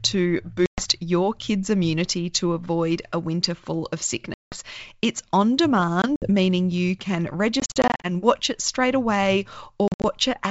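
Packet loss on the ADPCM call opens silent holes at 0.66, 4.34, 6.02, 7.60 and 9.88 s. Each loss desynchronises the decoder's predictor and step size, so audio resumes slightly distorted over the G.722 wideband path.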